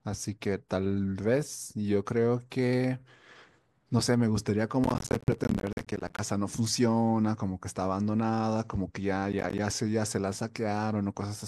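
Gritty crackle tears through the speech from 4.84 to 6.19 s and again from 9.33 to 9.59 s: processor overload crackle, where buffers of around 10 ms miss their deadlines and drop out as silent gaps.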